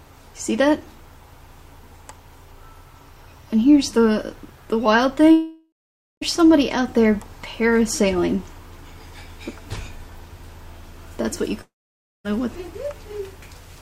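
Long network dropouts at 5.31 to 6.23 s and 11.61 to 12.26 s: the last sound is stretched into a fading buzz or hiss, then silence for about 0.5 s and 0.56 s. Audio resumes with roughly 0.9 s and 0.64 s lost, likely from packets that never arrived.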